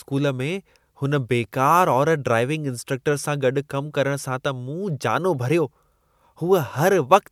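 Speech recording, no technical faults detected anywhere in the clip.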